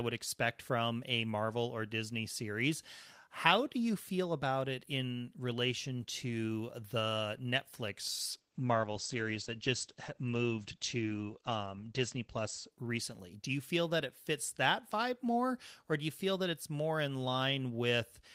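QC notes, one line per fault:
8.33–13.47 s, call bitrate drop: the top end vanishes above 8 kHz and the sound turns coarse and watery for about 3.8 s, consistent with the encoder being pushed from roughly 32 to 12 kbps. Full bandwidth returns before "you feel that it".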